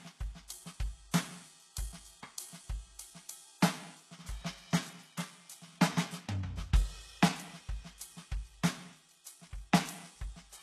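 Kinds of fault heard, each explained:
HE-AAC compression: The music plainly suffers from what is likely HE-AAC coding at a very low bitrate, around 16 kbps. At that rate only the lower spectrum is properly coded, and the treble is synthesised by copying lower bands upward under a coarse envelope. The top end is still present but is not genuine: its harmonics fail to line up with the real ones below, giving a gritty, metallic edge, and nothing remains above about 12.3 kHz.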